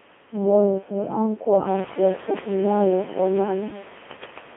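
From start to finish the speech has passed through a Codec 2 vocoder, and the damage is heavy. The decoder rebuilds the voice from pitch, voicing, energy and a coarse spectral envelope instead of preserving the waveform, so the result is robotic and buzzy, confined to roughly 200 Hz to 3.4 kHz. The degree of smearing fits the 2.4 kbit/s mode. The room noise that rises about 14 dB near 1.5 s gets mangled along with the voice, and a fade-out ends at 3.9 s.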